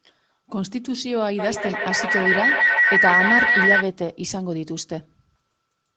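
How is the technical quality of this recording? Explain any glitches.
The recording has one clear glitch. From 1.39 to 3.92 s there is a feedback howl. Sound loops between a microphone and a loudspeaker on the same call, gaining level each pass. It builds to a shrill tone near 2 kHz, with the loop repeating roughly every 150 ms, peaking about 6 dB above the speech.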